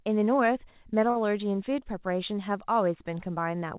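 At 1.10 s a late packet empties the jitter buffer, causing a short stall: the last sound is held for 54 ms, then speech resumes intact.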